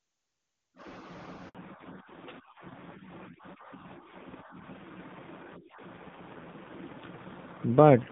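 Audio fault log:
1.49–1.55 s, handover gap: The audio cuts out for 60 ms, fading within a few tens of milliseconds and then sitting in silence until the new link begins delivering audio. This is the call being passed from one network to another: no audio frames arrive while the connection switches over, so whatever was sent in that window is simply lost, not delayed. The gap is short.
1.55 s to end, fallback to narrowband: Right after the gap, all content above 4 kHz disappears and stays gone for the rest of the clip. Before the switch the sound carries the full wideband range of HD Voice, with the clean, faint-artefact character of a high-rate AMR-WB link, which fits about 23.85 kbit/s. Afterwards it turns duller and rougher, which points to the new network having negotiated the older narrowband AMR codec, likely at a low rate around 7.4 kbit/s.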